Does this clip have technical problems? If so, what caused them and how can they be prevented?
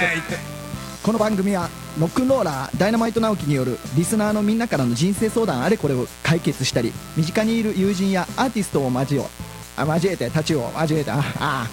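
Yes. A mains buzz at 60 Hz runs through the whole clip, sitting about 20 dB below the signal. Its raspy character comes from sharp switching spikes, such as from a dimmer or rectifier, injecting harmonics of 60 Hz well into the kilohertz range. Prevent it with shielded balanced cabling, isolated grounding, and recording away from dimmers and switching supplies.

Clock drift buffer slips are heard as a regular click roughly every 1.73 s, from 1.33 s to about 11.7 s, around seven clicks in total. The likely cause is two devices on independent clocks differing by a few hundred parts per million, so the buffer between them periodically drops or repeats a few tens of samples. Prevent it by locking all devices to a single word clock or using asynchronous sample-rate conversion.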